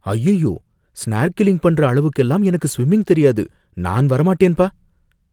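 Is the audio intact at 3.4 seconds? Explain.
Yes, the speech at 3.4 seconds plays through cleanly, with no dropout, click, distortion or other fault at that moment.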